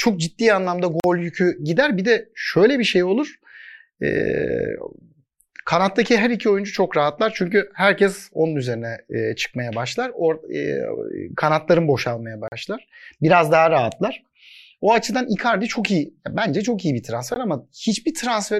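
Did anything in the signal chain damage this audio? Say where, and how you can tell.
Yes. Three blocks of digital silence point to the driver or buffer stage, where the output buffer wasn't filled in time and zeros went out instead. They fall at 1.00–1.04 s, between "ciddi anlamda" and "yükü gider"; at 12.48–12.52 s, after "kanatların boşalmaya"; and at 17.34 s, a 17.6 ms gap after "çok iyi bir". Each is an abrupt, unfaded cut. The waveform shows dead-flat segments, and the spectrogram shows black gaps bounded by thin broadband vertical lines.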